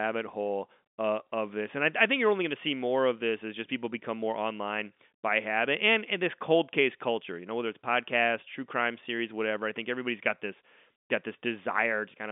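No technical faults occur at any point in the speech, which comes over an ordinary G.711 telephone line with nothing above 3.8 kHz.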